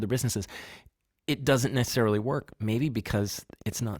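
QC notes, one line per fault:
1.56–3.95 s, train of clicks: a steady ticking of about twenty similar clicks, 9.25 per second at an even pace, peaking about as loud as the speech and heard through the pauses too; likely interference from nearby equipment or a faulty connection or power supply.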